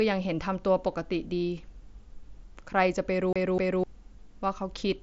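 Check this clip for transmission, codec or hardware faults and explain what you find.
One fault stands out, a CD stuck on one turn, heard from 3.33 to 3.84 s in this speech clip, which is carried over an mSBC Bluetooth headset link whose band stops near 8 kHz. A scratch keeps throwing the laser back a track at the same point on the disc, so a 0.25 s slice of audio replays twice, with a brief mute at each jump. It sounds like a fast, even stutter. A waveform shows identical blocks repeating at 254 ms intervals, and a spectrogram shows copied patterns split by thin vertical gaps.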